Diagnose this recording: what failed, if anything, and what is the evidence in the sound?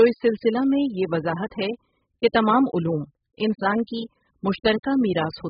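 AAC compression runs through the whole speech clip: nothing above 5.1 kHz, with smeared, fizzy sibilants and warbling sustained sounds. This is a codec-stage fault, likely AAC-LC starved at a rate near 8 kbps, quantising away the high bands.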